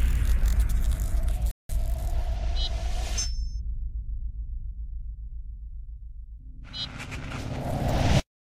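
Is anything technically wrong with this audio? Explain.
Yes. From 1.51 to 1.69 s the sound cuts to silence for 180 ms, then resumes; likely a Bluetooth stall, as delayed packets emptied the headphone buffer.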